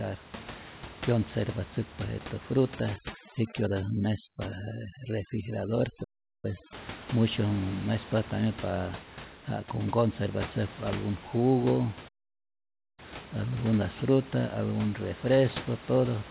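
At 0.34 s the speech makes a skip ahead: roughly 0.7 s of audio was dropped while later material was already queued, and playback joins the two sides with no fill, so part of the phrasing simply vanishes. On a waveform the envelope changes abruptly at a single seam with no silent gap, and a spectrogram shows harmonics and formants breaking discontinuously at one vertical line rather than fading.

From 1.08 to 1.79 s and again from 2.99 to 3.67 s there is jitter buffer speed-up. In each stretch the receiver held more audio than its target and trimmed it down by cutting out short pitch-period pieces, about 40 ms in all, running near 105% and 104% speed. The pitch stays put while the delivery sounds slightly hurried. The spectrogram shows normal harmonic spacing but compressed durations, and the waveform has tiny period-aligned splices that are hard to spot by eye.

Overdone noise removal covers 2.75 to 6.73 s, ending just before "mucho mespatät". 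The suppressor is set so hard that the background, which sits about 15 dB under the speech, drops to near silence with twinkling specks, and the weaker parts of the voice are lost with it. On a spectrogram the gaps between words look almost black, scattered with isolated time-frequency dots, the musical noise, and the fainter harmonics are patchy and eaten away.

Two playback stalls follow, from 6.03 to 6.45 s, about 0.4 s, and from 12.08 to 13.00 s, about 0.9 s. Both are likely caused by the player running out of data or its output thread being blocked. The sound stops mid-flow, goes fully silent, then carries on. Both the waveform and the spectrogram show a flat, empty block with hard edges, with no noise floor inside it. Throughout, the G.711 A-law call path leaves nothing above 4 kHz.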